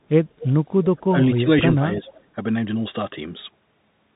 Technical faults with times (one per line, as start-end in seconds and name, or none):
0.00-4.16 Bluetooth CVSD headset codec
0.38-0.53 echo leak
1.09-1.48 speech suppressed in double talk
1.76-2.03 speech suppressed in double talk
2.03-2.21 echo leak